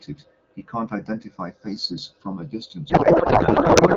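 Throughout the speech, the two channels are drifting apart. Their clocks disagree by roughly 100 ppm, so the delay creeps toward about 0.4 ms. Summed to mono, this heard as a slow flanging sweep.

From 2.89 s to the end, a codec payload misread takes over. The speech turns to garbled noise and warble. The pattern points to octet-aligned AMR being unpacked as bandwidth-efficient. The AMR-WB speech at 12.65 kbit/s before this is clear.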